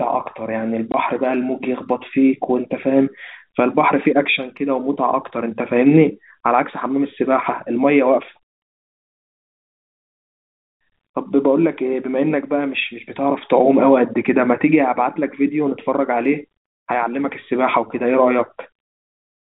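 At 0.92 s the speech drops out for a 20 ms gap, a short hole with abrupt edges. This is packet loss filled with silence: one packet's worth of audio never arrived, and the receiver played nothing in its place. The gap's length points to 20 ms packets. The narrow telephone band of the G.711 coding can be heard throughout.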